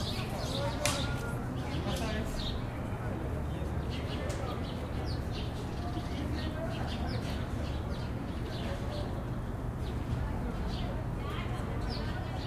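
No technical faults can be heard anywhere in this recording.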